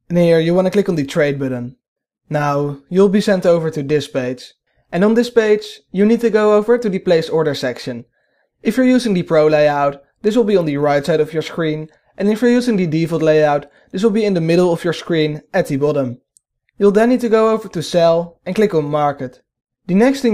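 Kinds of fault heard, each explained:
Nothing stood out on listening; no fault could be heard anywhere in the audio.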